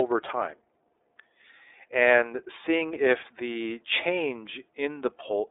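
iLBC codec artefacts run through the whole clip, from start to finish. This narrowband VoIP codec codes each frame's excitation independently of the previous one, and the texture here fits 30 ms frames in its 13.33 kbps mode. The speech sits within a telephone band of roughly 300 Hz to 3.7 kHz, with nothing above 3.8 kHz, so sibilants sound dull and boxy. The coding damage is plainly audible as a rough, slightly synthetic grain.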